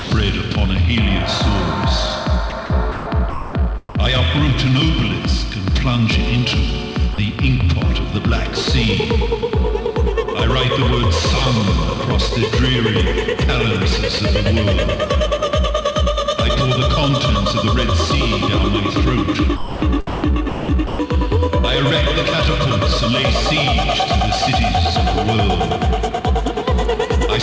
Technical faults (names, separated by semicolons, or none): sound dropped by the voice detector; sound chopped by the voice detector